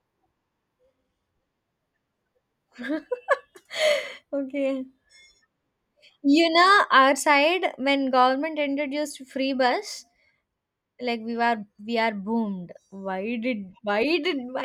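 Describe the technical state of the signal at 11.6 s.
At 11.6 s the speech signal is intact, with no audible fault at that moment.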